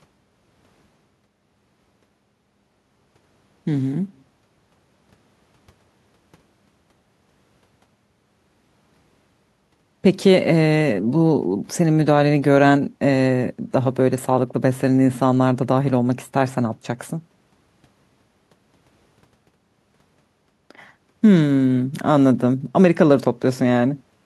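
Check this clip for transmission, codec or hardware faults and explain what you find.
Checking this clip turns up no faults to report.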